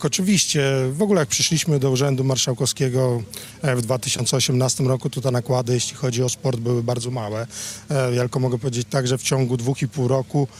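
Clock drift between sender and receiver runs through the whole clip: the sending clock is running about 4% slow against the receiver's, so the jitter buffer keeps draining and the receiver has to stretch the incoming audio to avoid running dry.

Repeated timing corrections follow from 0.10 s to 10.42 s. The receiver keeps repeating short pieces, all in the same direction and unevenly spaced, adding roughly 0.4 s overall. The audio plays at about 96% speed, with faint hiccups.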